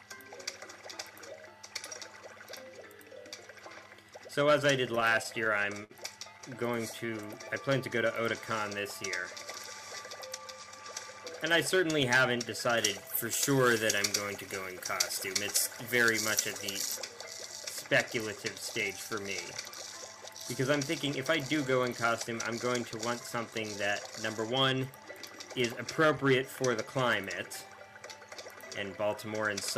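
From 4.95 to 5.93 s, and again from 6.38 to 7.11 s, the audio shows repeated stalls (stutter). Packets reached the jitter buffer too slowly, so it kept running dry and the receiver stretched the last sound to cover each wait. The first run has ten such holds totalling 144 ms, the longest 57 ms. The second has six totalling 61 ms, none over 17 ms. Nothing is lost, but the sound drags and judders.

Straight after, from 7.10 to 8.09 s, comes a jitter buffer slow-down. The receiver repeated single pitch periods to rebuild its reserve, adding 72 ms, so playback runs at 93% speed with unchanged pitch and slightly drawn-out sounds.

A jitter buffer speed-up follows at 10.16 to 10.67 s. The buffer held excess audio, and trimming short pitch-period slices removed around 70 ms, pushing playback to 110% at the same pitch. It sounds noticeably hurried.

From 12.77 to 16.97 s, pre-emphasis was left on. 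A treble boost, consistent with a 75 µs FM curve, was never undone by the matching de-emphasis. This leaves 10 kHz about 13 dB hot relative to 1 kHz, and the sound comes out thin, bright and sibilant.

A second, milder jitter buffer speed-up runs from 22.11 to 22.77 s. Roughly 40 ms is cut out there, giving 105% speed, which is a slight rush with the pitch unchanged.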